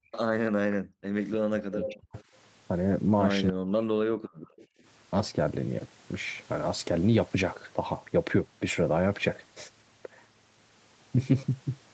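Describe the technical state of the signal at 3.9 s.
At 3.9 s the speech sits inside a stretch of speech suppressed in double talk, running from 3.50 to 4.54 s. The sound is chopped and sharply turned down, falling by roughly 40 dB at its deepest, with about 0.7 s lost in total. This is likely an echo canceller mistaking the near talker for loudspeaker echo while both sides spoke. The waveform shows collapsed, gappy envelopes, and the spectrogram shows dark vertical holes across the band.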